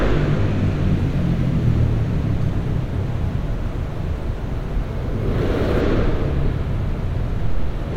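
A recording of everyday sounds with sample clock jitter from 0.94 s to 5.81 s. A fine hiss and grain ride on top of the sound there. The roughness swells on loud and bright moments and drops away in quiet gaps. The converter's clock is wandering by a few microseconds. Each sample lands slightly off time. Steep, fast-changing parts of the waveform suffer most. The resulting error sits roughly 40 dB below the sound.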